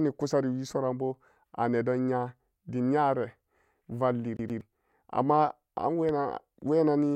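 At 4.37 s the speech catches and stutters. A fragment of about 121 ms plays twice in quick succession, each pass cut off by a tiny mute at the jump, until normal playback resumes at 4.61 s. This is the CD stuck on one turn fault: a scratch kicks the laser back a track at the same point on the disc's rotation, so the same sliver of audio loops with an even, mechanical rhythm.

Between 6.09 and 6.12 s a single loud pop cuts through, a sharp click peaking roughly 5 dB above the speech, which carries on underneath without a break. The burst is brief and percussive. Its likely cause is a sudden voltage step or spike entering the signal path, such as static discharge, a switch or connector transient, or a momentary driver glitch.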